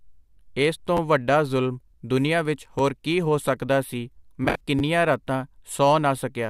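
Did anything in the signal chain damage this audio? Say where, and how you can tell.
Yes. Repeated buffer at 0.97–0.99 s after "ਏਸ ਤੋਂ", 2.79 s before "ਹੋਰ ਕੀ ਹੋ ਸਕਦਾ", and 4.79–4.81 s: late driver data replays short chunks, heard as clicky stutters fitting a 10 ms buffer.

AAC frame loss with concealment at 4.44–4.62 s, after "ਕੀ ਹੋ ਸਕਦਾ ਸੀ": about 107 ms of lost codec frames, patched from earlier spectra, produce a smeared, noisy stretch.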